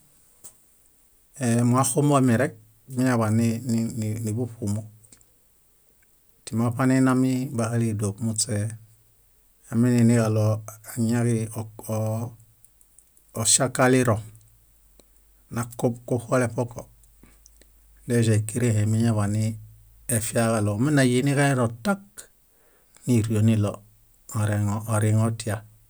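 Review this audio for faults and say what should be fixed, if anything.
Nothing stood out on listening, so there is nothing here that needs fixing.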